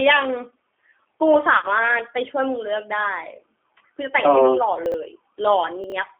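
Speech heard through a narrowband G.729 codec link at 8 kbit/s, with one concealed packet-loss gap and two spots where audio plays out of order. The G.729 coding runs through the whole clip and is plainly audible. The voice has the slightly rough, synthetic edge of a codec that rebuilds each frame from a vocal tract filter and a small set of pulses. The band is confined to roughly 300 Hz to 3.5 kHz. On a spectrogram there is an empty region below 300 Hz and a flat ceiling near 3.5 kHz with nothing above it.

From 1.56 to 1.67 s comes VoIP packet loss concealed by the speech codec. About 60 ms of audio is missing, scattered over 80 ms, with the longest single gap 30 ms, which fits a handful of lost 10 ms frames. The decoder fills the holes by repeating its last pitch and filter at falling gain, so the sound is briefly stretched and fades. On a spectrogram this shows as smeared, fading energy. 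The waveform dips in level and recovers slowly afterward.

At 4.86 to 4.94 s and again at 5.84 to 5.92 s, chunks are out of order. In each spot a 20 ms chunk plays three chunks later than it should. Each moment sounds jumbled. The waveform shows three abrupt discontinuities at every such spot, and the spectrogram shows thin vertical broadband lines at the joins.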